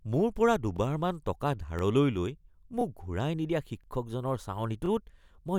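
Overlapping chunks cause a short stutter at 0.77, 1.79, 2.81, 3.84 and 4.86 s, one every 1.02 seconds. The first comes just after "মোৰ পৰা" and the second just before "লৈ মোক". The audio was handled in 1.0 s chunks, each starting about 23 ms before the previous one ended, so that sliver plays twice. A waveform shows a duplicated segment with a discontinuity at each join, and a spectrogram shows thin vertical broadband lines at regular spacing.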